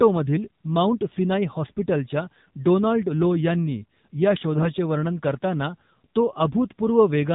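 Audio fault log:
throughout AMR narrowband mobile codec: the speech went through an AMR-NB mobile coder at 8 kHz sampling, removing everything above 4 kHz, and the plainly buzzy, synthetic edge fits a low bitrate around 7.4 kbps, where too few pulses drive its vocal-tract model.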